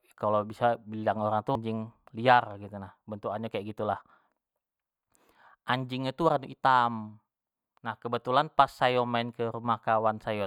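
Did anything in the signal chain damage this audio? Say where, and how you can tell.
Yes. At 1.55 s there is a brief blip typical of damaged data in a compressed stream, a codec-stage fault. Corrupted bytes in the encoded file make the decoder misread a frame, lose sync and resume at the next valid frame header.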